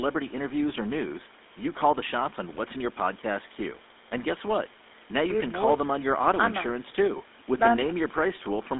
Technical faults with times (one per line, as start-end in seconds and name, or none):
0.00-8.79 GSM full-rate codec